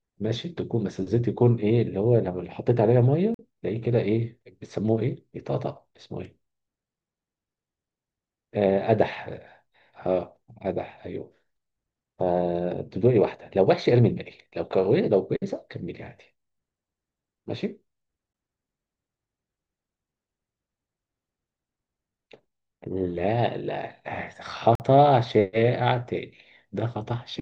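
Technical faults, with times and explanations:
3.34–3.39 s, 18.33 s, 24.75–24.80 s: block of digital silence. The speech drops abruptly to silence and returns with no fade. The 46 ms holes fit an unfilled 2048-sample buffer; the 14 ms one is a short tick.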